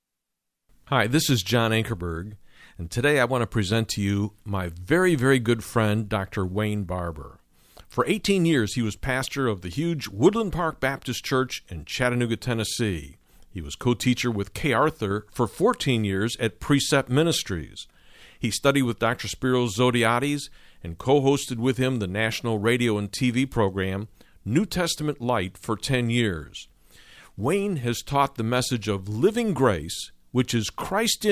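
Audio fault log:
No audible faults found.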